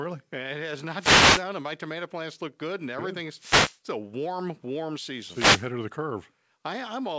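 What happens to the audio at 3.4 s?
The analogue FM radio link from the wireless microphone fades as reflected signals cancel, and receiver noise surges in: a wireless microphone noise hit from 3.35 to 3.80 s, just after "plants look good and", heard as a burst of static swishing over the speech.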